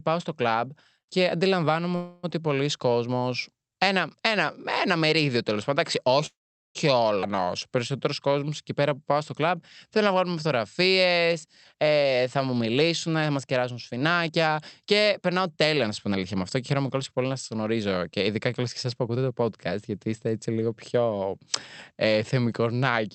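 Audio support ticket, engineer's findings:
Call audio freeze, 1.95–2.25 s, between "στο κλαμπ και αντιλαμβάνομαι" and "ότι πολλοί": about 0.28 s of filled sound. Second freeze, 6.26–6.77 s: a brief fading fill, then about 0.42 s of silence. Likely cause: packets held up and the jitter buffer running dry while the receiver stretched the last sound. Unlike a skip, nothing is lost. Speech resumes where it stopped, and delay grows about 0.28 s and 0.49 s.

Skip ahead, 7.21–7.24 s: a near-seamless join with roughly a third of a second of speech gone. The jitter buffer or network dropped a stretch while later audio was already queued. It differs from a freeze because there is no inserted gap, only missing content, and latency drops about 0.3 s.

Jitter buffer slow-down, 7.27–11.34 s: speech runs at 92% speed with unchanged pitch, adding about 0.31 s. Single pitch periods were repeated to rebuild the buffer reserve. 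Because pitch holds, this is not a clock or sample-rate mismatch, and the result is drawn-out sounds rather than a gap.

Jitter buffer speed-up, 11.47–19.42 s, ending before "γιατί είστε έτσι λίγο": speech runs at 109% speed with pitch steady and sounds hurried. Short pitch-period pieces were cut repeatedly to shed excess delay, about 0.7 s in total. This is the reverse of the slow-down, and unlike a skip no single join is audible. The audio is carried over an Opus path with the top end limited near 8 kHz.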